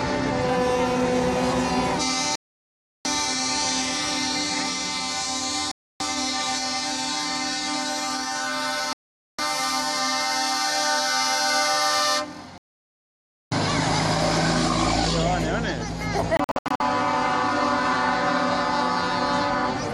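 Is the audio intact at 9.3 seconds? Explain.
No. At 9.3 seconds the audio is inside a digital broadcast dropout lasting from 8.93 to 9.39 s, about 0.46 s. The receiver stopped getting valid frames and muted until good ones returned, so the sound drops to silence and resumes with the missing material gone, not delayed. Packet-loss concealment would fill the gap with smeared or repeated sound, and an analogue dropout would leave a weakened, muffled signal. This is a clean hole with nothing in it.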